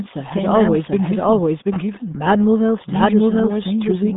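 From start to finish the speech carries a second, equally loud copy trailing roughly 0.7 s behind, a dry, full-band echo with no decay or room colour. This doubled audio track is likely the same signal captured twice, once through a slower path.

Throughout, the speech is also muffled and gargly, squeezed into a narrow line band of about 150 Hz to 3.7 kHz with nothing above 3.8 kHz. That heavy damage is the mark of the RealAudio 14.4 codec, and it fits an 8 kbit/s dial-up stream.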